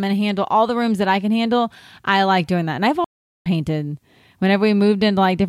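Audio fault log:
3.04–3.46 s stream reconnect: the speech cuts to about 0.40 s of silence, then resumes roughly 0.3 s further on, skipping that stretch. The connection dropped, the player reconnected to the live stream, and a fresh decoder picked it up mid-stream.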